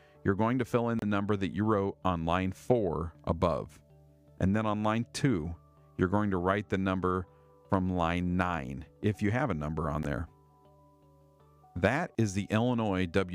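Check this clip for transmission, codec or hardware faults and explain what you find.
Two short Bluetooth dropouts are audible, at 0.99 to 1.03 s and at 10.03 s. They are likely caused by audio packets failing to reach the headphones in time and being discarded. The output goes silent for about 29 ms, then 14.5 ms, which fits two lost packets and then one, and the sound resumes further along as though it had kept playing.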